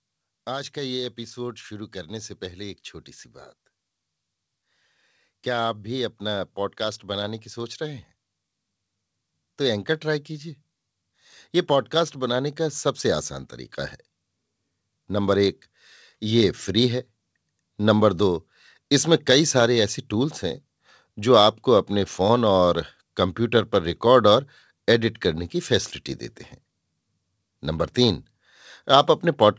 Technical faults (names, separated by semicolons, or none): automatic gain rising